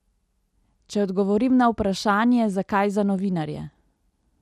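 MP2 compression runs through the whole of this short speech clip. It sounds dull and plainly gurgling, with a granular edge on the voice, which likely comes from MPEG Layer II coding at a rate that fits about 80 kbps. At that rate the encoder can't give enough bits to its 32 sub-bands, so upper bands drop out and flicker while the remaining ones are coarsely quantised. DAB burbling appears from 3.65 to 3.91 s, right after "zakaj za", as a brief burbling disturbance over the speech. It is what weak reception does when a small fraction of a percent of bits arrive wrong and slip past error correction into the MP2 data. Corrupted samples put short blips of noise into single sub-bands, and across this quarter-second that produces the burbling.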